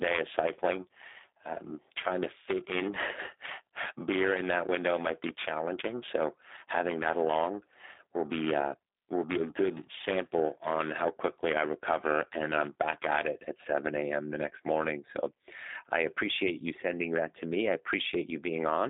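G.729 codec artefacts throughout: speech rebuilt from a vocal-tract filter and sparse pulses sounds plainly rough and synthetic, pointing to 8 kbit/s G.729A, band-limited to 250 Hz to 3.7 kHz.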